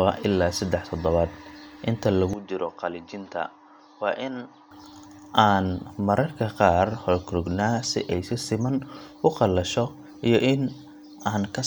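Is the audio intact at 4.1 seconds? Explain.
No. From 2.33 to 4.71 s the recording has likely switched its input to a poorer device, one passing nothing above 6.6 kHz. The speech abruptly turns dull and boxy, drops by about 5 dB, and picks up a faint new noise floor, with no gap at the switch.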